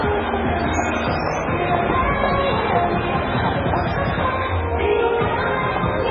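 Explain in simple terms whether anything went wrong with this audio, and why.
Something did go wrong, and it runs the whole way through, from the first second to the last. The audio has been squeezed hard, and there's nothing above about 6.9 kHz, so it sounds dull and a bit muffled. That points to MP3 compression, and likely a very aggressive setting. When the encoder is starved, it drops the top end and switches faint details on and off between frames, which gives the heavy watery, swirly texture and the smeared edges you hear here.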